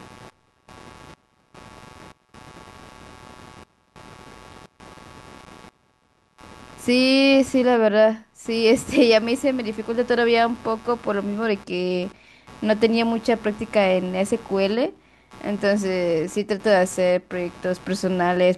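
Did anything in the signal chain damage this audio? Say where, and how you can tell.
Yes. There's computer activity noise in the analogue wiring across the whole clip: a buzzy, chirpy layer pulsing at roughly 150 Hz, sitting about 25 dB under the speech. It tracks the machine's load, not the talking, because processor and graphics activity are disturbing the shared audio ground.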